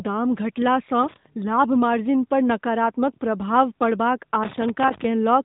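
A speech clip carried through the AMR narrowband mobile codec: nothing above 3.8 kHz survives, and the pulse-driven vocal-tract model leaves the voice plainly buzzy and synthetic, a degree of damage that points to a mid-rate mode of about 10.2 kbps. Loose connector crackle appears twice, from 1.03 to 1.26 s, just before "लाभ मार्जिन पर नकारात्मक", and from 4.43 to 5.05 s, right after "पर नकारात्मक प्रभाव पड़बाक". In each burst a failing contact chops the signal into irregular scratching.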